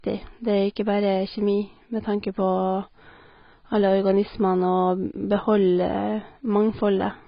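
From start to end, the speech sounds dull and smeared. Nothing reaches above about 5.1 kHz. Sibilants turn fizzy and vowels warble. This points to heavy AAC compression, likely AAC-LC at a low bitrate around 16 kbps, cutting the top band and coarsely quantising the rest.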